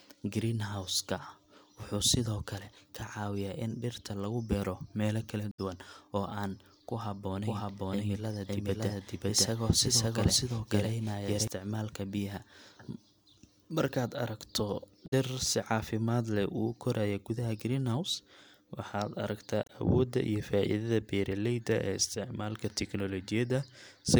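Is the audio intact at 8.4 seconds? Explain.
No. At 8.4 seconds the speech is a doubled audio track, which runs from 7.46 to 11.48 seconds. A second copy of the same speech plays about half a second behind the first. It is roughly as loud as the original. The late copy is full-band and dry, with no decay or room colour. It starts and stops abruptly at the span's edges. The likely cause is a slower capture path recording the sound a second time.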